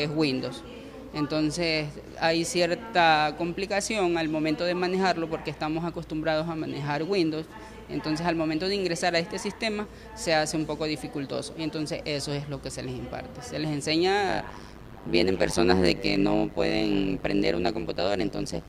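From 14.28 s to the end, overlap-add ripple: mismatched frame overlap makes the level dip about 60 dB roughly a hundred times a second, a deep metallic buzz, steadier than random dropouts.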